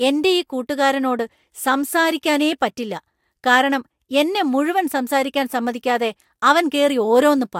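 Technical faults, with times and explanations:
Nothing in the speech stood out as a technical problem on listening.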